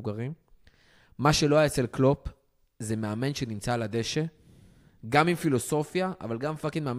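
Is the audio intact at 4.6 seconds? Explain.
Yes, the speech at 4.6 seconds is intact, with no fault at that moment.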